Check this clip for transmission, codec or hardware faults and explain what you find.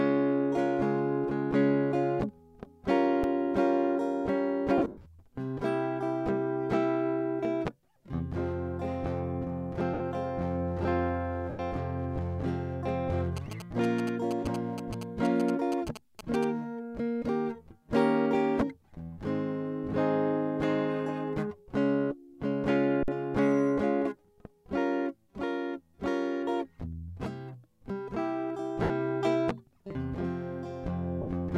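The music carries three kinds of fault: two output underruns, five bursts of lost Bluetooth LE Audio frames, and a stretch of GSM interference. Light lossy compression is also present, but its damage is slight.

Underrun with held sample, at 3.23 s and from 23.03 to 23.08 s: the output buffer ran dry and the converter froze on its last value, so the waveform flattens for about 6 ms and then 50 ms. The music briefly stops dead and resumes with a small jump where a similar amount of audio went missing.

Lost LE Audio frames, at 4.78–5.07 s, 9.94–10.00 s, 11.50–11.60 s, 28.83–28.90 s and 31.22–31.27 s: the LC3 decoder filled each gap by repeating the last spectrum with scrambled phase. Tones blur into a noisy smear for 50 to 220 ms. The first event scatters 220 ms of loss over 280 ms, with runs up to roughly a tenth of a second that start to fade.

GSM signalling bursts, from 13.37 to 16.45 s: a nearby 2G phone's handshake transmissions were rectified by the audio circuitry. 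The result is a galloping pattern of ticks and short buzzes at 217 Hz, about 10 dB below the music.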